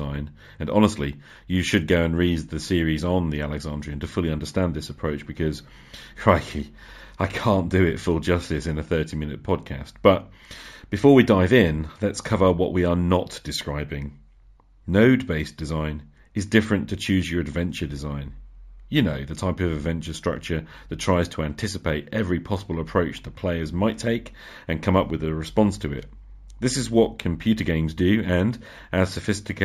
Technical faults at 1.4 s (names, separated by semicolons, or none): imaging from linear upsampling